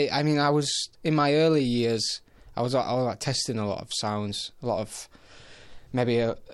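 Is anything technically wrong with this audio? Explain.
No, the signal holds steady throughout, with nothing in it pointing to a technical problem.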